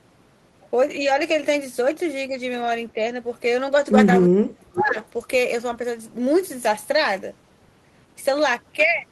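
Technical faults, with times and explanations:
2.94–3.02 s and 4.26–4.96 s, speech suppressed in double talk: The speech dips slightly in the first brief moment, then drops almost to silence for about 0.7 s in the second. This likely comes from an echo canceller mistaking the talker for loudspeaker echo and turning both down while the far side spoke.
4.76–4.92 s, echo leak: A delayed copy of the speech arrives about 458 ms late, clearly quieter than the direct sound. A loudspeaker's output was likely picked up by the microphone and not fully cancelled, so a scrap was sent back.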